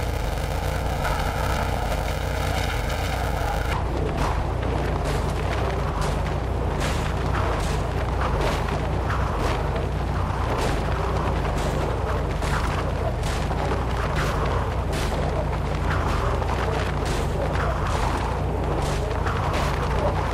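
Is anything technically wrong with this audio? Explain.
Yes. From 0.0 to 3.73 s, planar audio is read as interleaved. Each block's left samples, then right samples, are taken as alternating pairs, so each 2.67 ms block (which fits 128-sample blocks) plays twice at double speed. The result is a robotic buzz at 375 Hz, without a clear octave shift.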